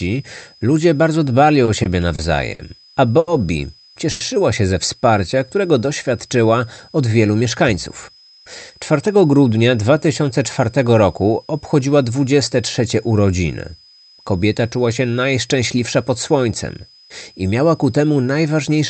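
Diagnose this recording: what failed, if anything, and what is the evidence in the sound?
Analogue power stage: a switching supply whistle sits near 5 kHz for the whole recording, wandering between about 4.99 and 5.09 kHz, roughly 30 dB below the speech. On a spectrogram it is a thin, slightly wobbling horizontal line, as the supply's switching frequency shifts with load.

Network and jitter buffer: repeated stalls (stutter) from 1.65 to 2.61 s. Four gaps, the longest 50 ms, were filled with 120 ms of continued sound and nothing lost. The waveform shows brief held, repeating stretches where late packets left the buffer empty.

Same stage: two short stalls from a late packet, at 3.19 to 3.29 s (80 ms) and 4.11 to 4.22 s (90 ms). Each holds a sound too long with a slight buzz or dip, then resumes seamlessly. A spectrogram shows a smeared, frozen pattern across that span.

Jitter buffer speed-up from 7.40 to 8.80 s: playback runs at 110% with pitch unchanged, trimming about 150 ms of backlog by cutting out short pitch-period slices. 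The speech sounds hurried, and on the waveform the syllables appear compressed in time without any pitch shift.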